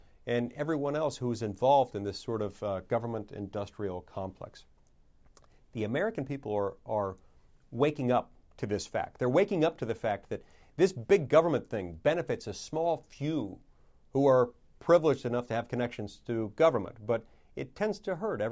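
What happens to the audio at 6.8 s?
Nothing goes wrong at 6.8 s; the speech there runs on intact, with no dropout, click, distortion or other fault at that moment.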